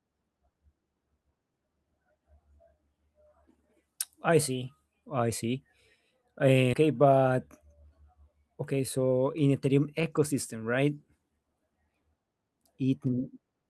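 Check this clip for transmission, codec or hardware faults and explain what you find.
Two transmission faults turn up, one of them tied to the jitter buffer.

At 6.73 s there's a skip ahead: roughly 0.4 s of speech was dropped while later audio was already queued, so playback jumps straight across the gap with no filler and the two sides butt together.

Right after, from 6.83 to 7.77 s and again from 8.73 to 9.12 s, you get jitter buffer speed-up. The buffer was running deeper than its target, so the receiver trimmed tiny pitch-period slices over and over, roughly a tenth of a second in the first stretch and about half that in the second. Speech runs about 11% fast at unchanged pitch and sounds a bit hurried.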